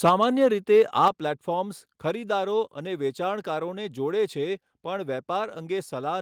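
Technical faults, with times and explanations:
0.05–0.47 s, microphone overload: the loudest syllables get a harsh, crackly edge because the peaks run about 6 dB past the converter's limit and get flattened; likely the input gain was set too hot.
0.09 s, microphone volume stepped down: level drops by about 2 dB in one jump, voice and background together, likely the call software easing the mic gain after catching that clipping.
0.73–1.08 s, microphone overload: the gritty, squared-off peaks are back, about 3 dB over this time, with roughly a couple of percent of samples chopped flat, likely because the input is still too hot.
1.08 s, microphone volume stepped down: an abrupt, bigger dip of about 5 dB right as that distortion ends, likely the software cutting the mic gain again in a single step.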